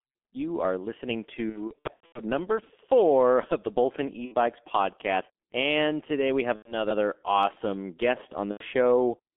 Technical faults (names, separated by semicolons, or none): G.723.1 codec; VoIP packet loss concealed by the speech codec